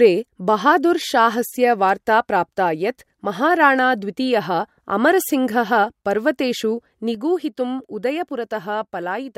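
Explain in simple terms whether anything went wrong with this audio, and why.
Something went wrong near the end. At 7.15 seconds there is a sudden gain jump: the volume setting inside the recording chain most likely changed in one instant instead of easing gradually. From that moment until the clip ends, the speech suddenly becomes noticeably quieter, and the background noise drops along with it. Because both fall together at the same instant, it sounds like someone abruptly turned a volume knob down.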